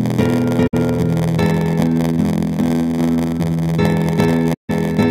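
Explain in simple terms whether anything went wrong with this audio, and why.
Yes, two things went wrong. The first is a block size mismatch (padded). One stage hands over shorter chunks than the next expects, which fits a 512-sample read block, so each chunk gets a bit of silence tacked on. That causes a steady buzz at 86.1 Hz throughout. The sound also plays about 6% slow, at roughly normal pitch.

The second is AAC frame loss with muting. Small pieces of the encoded audio went missing, and the player replaced them with silence. The sound fades out and back in. It happens from 0.67 to 0.75 s, about 64 ms, and again from 4.53 to 4.70 s, about 150 ms.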